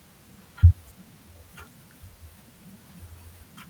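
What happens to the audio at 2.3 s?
Nothing goes wrong at 2.3 s; the speech plays through that moment intact, with no dropout, click or distortion.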